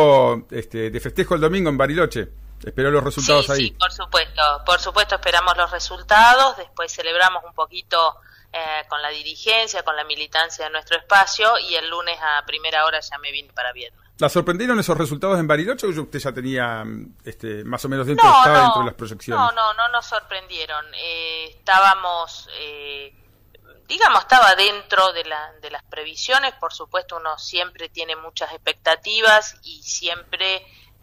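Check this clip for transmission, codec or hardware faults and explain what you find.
One fault is present: mains hum from 0.91 s to 6.28 s. A steady 50 Hz tone sits under the sound at roughly 20 dB below the signal level, with some low harmonics. It comes from power-line current leaking into the signal path, most likely through a ground loop or a nearby transformer. On a spectrogram it shows as a bright horizontal line at 50 Hz, with weaker lines at 100 and 150 Hz.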